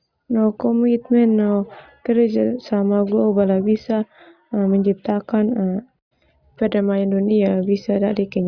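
No technical faults are audible.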